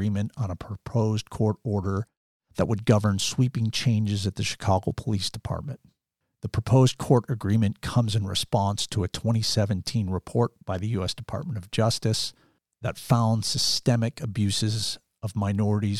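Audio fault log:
No audible faults found in this speech recording.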